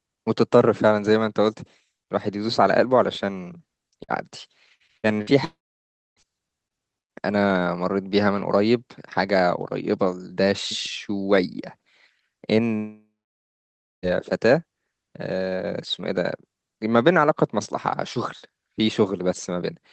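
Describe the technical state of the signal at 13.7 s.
At 13.7 s the signal is silent, inside a long network dropout from 12.77 to 14.06 s, likely from lost packets. A brief fading buzz gives way to silence, and the speech resumes with that stretch missing rather than merely delayed.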